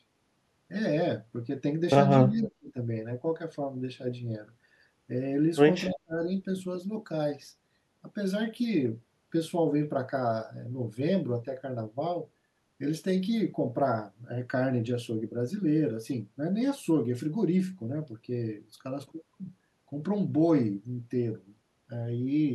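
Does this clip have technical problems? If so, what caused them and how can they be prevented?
Yes. The speech drops out sharply twice, from 2.24 to 2.76 s and again from 5.87 to 6.27 s, falling by about 35 dB so it all but vanishes for roughly half a second the first time and 0.4 s the second. That's most likely speech suppressed in double talk: with both ends talking at once, the echo canceller couldn't tell this talker from the loudspeaker echo and turned everything down. A canceller with better double-talk detection, or a headset on this end, would prevent it.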